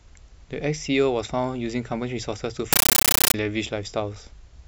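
A compressed stream played as audio breaks in from 2.73 s to 3.34 s: the speech gives way to very loud, chattering static. An AC-3 bitstream is reaching the output as if it were ordinary PCM samples, never decoded. Each encoded frame comes out as a 13.3 ms burst of noise followed by silent padding, repeating 31.25 times a second. That rhythm produces the harsh rattle, and the density of the bursts fits a 640 kbps stream.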